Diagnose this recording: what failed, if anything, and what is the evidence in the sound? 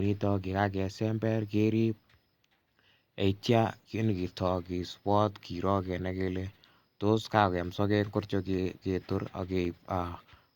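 Nothing failed; the sound gives no evidence of a fault at any stage of this recording.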